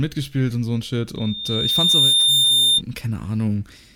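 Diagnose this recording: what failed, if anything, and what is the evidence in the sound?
Loudspeaker feedback squeal, analogue stage: loop gain exceeded one at 3.6 kHz, a tone swelling over about a second from 1.17 s to 2.82 s.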